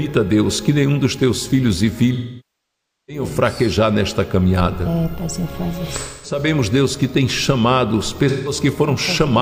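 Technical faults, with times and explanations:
2.14–3.23 s, 5.98–6.39 s and 8.28–8.52 s, AAC frame loss with concealment: the decoder lost frames and patched each gap from the last good spectrum, so you get smeared, noisy fill. The long 0.94 s hole sags toward silence before recovering; the 0.26 s and 0.17 s ones stay short patched patches.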